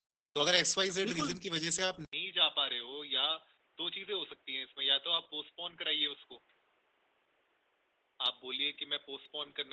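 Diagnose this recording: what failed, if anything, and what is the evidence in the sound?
Opus voice compression runs through the whole recording, at the codec stage. The speech sounds muffled, hoarse and a little robotic. That fits SILK mode at about 10 kbps, limited to a wideband 8 kHz band, with the excitation coded coarsely in 20 ms frames.

At 2.05 s the audio drops out for 80 ms, then returns duller and about 5 dB quieter. Nothing is left above 3.8 kHz, and a faint new noise floor sits well below the speech. This is likely an input switched to a poorer device at the driver or routing stage.

From 7.26 s to 9.26 s there are periodic USB or driver dropouts, at the driver or buffer stage. Small ticks recur every 0.5 s, about five of them. Each is roughly a millisecond of audio replaced by silence when the bus or driver stalls.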